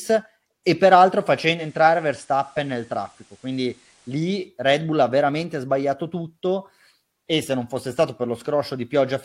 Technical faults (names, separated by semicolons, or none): digital radio blending to analogue